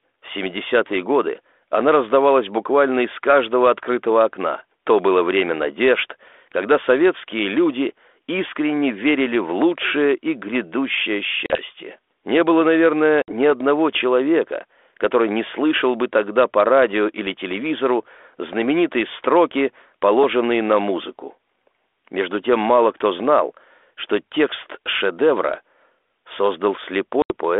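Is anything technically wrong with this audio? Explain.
Yes. The speech has packet loss on an ADPCM call, heard three times: 11.46 to 11.64 s (40 ms lost), 13.22 to 13.32 s (60 ms lost), and 27.22 to 27.33 s (80 ms lost). Each gap is a sharp-edged silence where a few packets went missing. The G.726 decoder's adaptive predictor and step size then no longer match the sender's, so speech comes back slightly distorted before settling over some tens of milliseconds. The underlying 32 kbit/s G.726 line, band-limited to 250 Hz to 3.5 kHz, carries only light codec damage.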